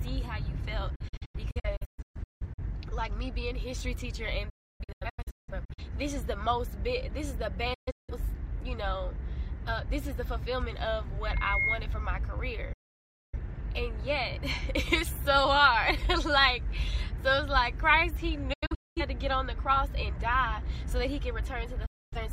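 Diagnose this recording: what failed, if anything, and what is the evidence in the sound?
Digital broadcast dropout, at reception and decoding: the sound mutes with 8 ms fades at 0.95–2.63, 4.49–5.83, 7.74–8.13, 12.73–13.38, 18.53–19.02 and 21.86–22.17 s. The earlier holes break into several short gaps, the longest lasting 0.3 s. Frames that fail their checks are muted, which shows as full-band vertical blank stripes on a spectrogram and flat silent runs in the waveform.

Loudspeaker feedback squeal, an acoustic loop between microphone and loudspeaker: from 11.23 to 11.80 s a 2.1 kHz tone swells over roughly 0.4 s to about 5 dB above the sound. The loop's gain exceeds one at that frequency, and it appears as a bright horizontal line on a spectrogram.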